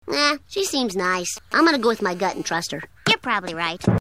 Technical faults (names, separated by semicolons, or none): GSM signalling bursts; GSM phone buzz